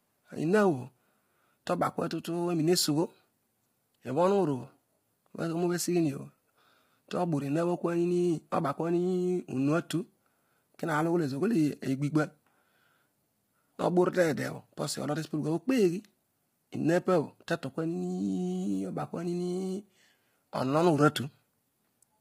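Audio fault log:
throughout: low-delay AAC compression. The speech sounds heavily rough and grainy, with noise filling the gaps between harmonics, likely from AAC-ELD, whose short frames blur pitch detail; the damage fits a bitrate near 24 kbps. A spectrogram shows smeared harmonics and nothing above 15.7 kHz.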